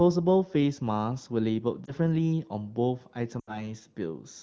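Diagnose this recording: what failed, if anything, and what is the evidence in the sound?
Network stage: lost AMR speech frames. At 1.86–1.93 s the speech dips and warbles briefly, pointing to one lost frame. From 3.39 to 3.69 s it drops to near silence, fitting a run of about four, as the decoder repeated the last pitch and vocal-tract parameters at falling gain.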